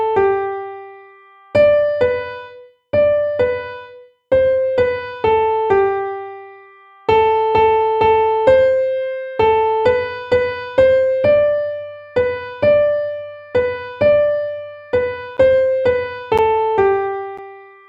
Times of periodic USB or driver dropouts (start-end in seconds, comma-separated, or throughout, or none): 15.37-17.39